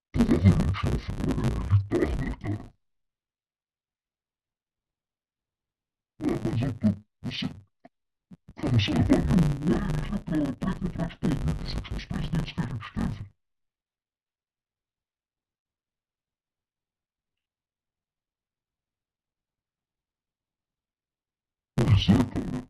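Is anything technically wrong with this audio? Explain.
Yes. Throughout the speech, interleaved audio is being read as planar. Each 10 ms block of alternating left-right samples is split into halves played at half speed, so the speech sounds dull and robotic with a 100 Hz buzz. Unlike a sample-rate mismatch, pacing stays correct and there's no clear octave drop.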